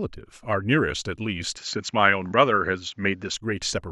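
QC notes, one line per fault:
1.57–3.34 s, input likely switched to a poorer device: the speech abruptly loses everything above 7.6 kHz, with no gap at the switch, no clear level jump and a faint new noise floor, then returns. On a spectrogram the upper band cuts off flat, then reappears.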